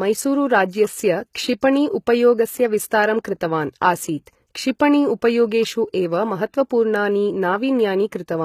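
From start to finish the speech carries plainly audible codec damage, most likely from HE-AAC compression at a low bitrate, around 20 kbps. Only the lower spectrum is coded directly; the treble is rebuilt by spectral band replication, copying lower bands upward under a coarse envelope, so harmonics fail to line up above the crossover and sibilants take on a synthetic edge. A spectrogram shows a hard ceiling at 14.9 kHz, with repeated, blocky texture in the upper band.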